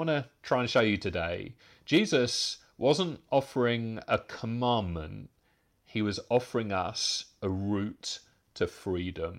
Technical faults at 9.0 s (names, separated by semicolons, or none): none